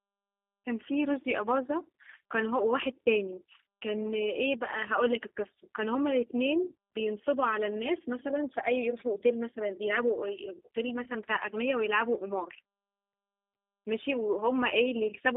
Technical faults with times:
0.00-15.36 G.729 codec
11.04-11.07 VoIP packet loss concealed by the speech codec

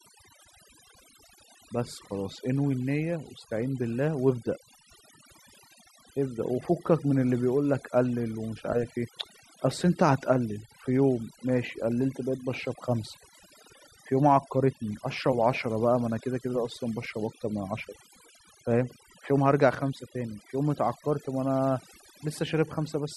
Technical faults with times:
0.00-23.17 overdone noise removal

